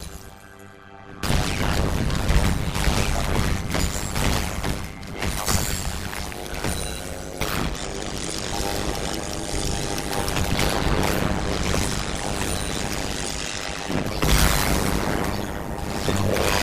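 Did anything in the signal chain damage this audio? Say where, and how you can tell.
Yes. The damage comes from a frame-based processing stage, such as call processing that splits the signal into windowed frames and rebuilds it. The result is overlap-add ripple throughout the clip. The level dips by about 60 dB once per frame, around 100 times a second, giving a harsh, metallic buzz. The windows' overlap doesn't sum to constant gain. Unlike packet-loss dropouts, which are irregular, these dips stay perfectly periodic at the frame rate.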